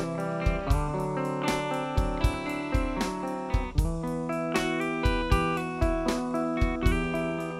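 No technical faults can be heard at any point in this audio.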